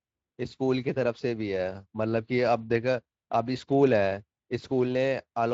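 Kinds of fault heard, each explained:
No faults heard in this speech, which is band-limited to about 7.6 kHz by its codec.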